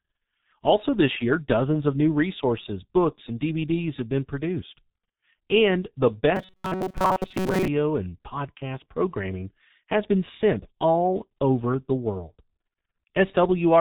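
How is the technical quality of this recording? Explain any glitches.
The technical quality is poor. The whole recording passes through a heavy low-bitrate telephony codec, and one stretch of about a second breaks into a mechanical buzz.

From start to finish, the speech carries the sound of the G.723.1 codec. Nothing comes through above 4 kHz, so the speech is muffled. The codec builds each 30 ms frame from a slowly updated voice model, which leaves the voice hoarse and smears consonants together. The damage is heavy and fits a rate of about 6 kbit/s. Plain low-pass filtering would also remove the highs, but it would leave the voice smooth. The grainy roughness here is what points to a codec.

From 6.36 s to 7.68 s, the speech becomes a rigid, metallic buzz at 188 Hz. It still follows the speech contour loosely, which marks it as robotic sound from repeated short buffers. The likely cause is audio arriving too seldom, so the player loops a fragment of about 5.3 ms (one over 188 Hz) to fill the time. 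Most of the real audio in that span, around seven tenths of it, is skipped. A dropout or a packet-loss gap would produce silence or a stutter. This fault instead produces a steady fixed pitch, because the same short chunk repeats at a constant rate.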